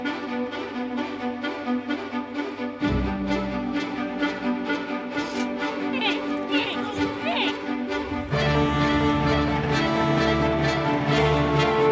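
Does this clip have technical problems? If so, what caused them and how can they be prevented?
No, no technical faults here.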